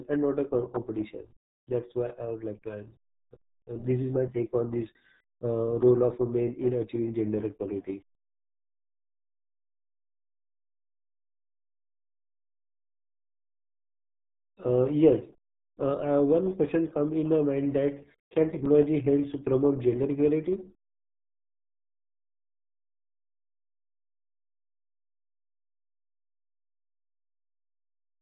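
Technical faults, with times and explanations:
Throughout, RealAudio 14.4 codec: heavy damage at 8 kbit/s leaves speech muffled and gargly, with nothing above 3.8 kHz, consistent with a dial-up-era low-rate coder.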